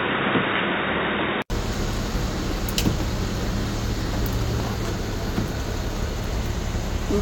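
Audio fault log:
0.0–1.5 s, input switched to a poorer device: the sound is dull, with nothing above 3.8 kHz and a faint added noise floor well below the signal. At 1.5 s an 80 ms gap precedes wider-band sound at unchanged level, likely a return from a narrower-band input.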